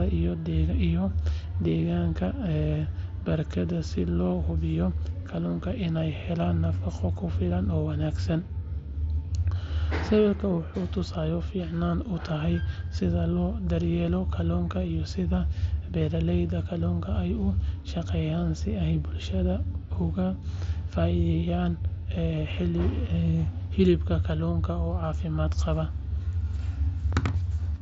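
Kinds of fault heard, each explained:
No faults can be heard in this speech clip. It has passed through a Bluetooth mSBC headset link, which holds the speech to a wideband range of about 8 kHz and leaves a light graininess on the louder sounds.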